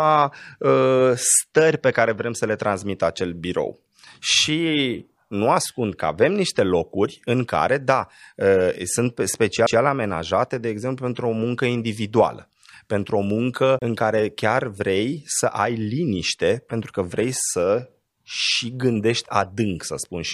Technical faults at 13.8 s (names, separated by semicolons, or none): CD skip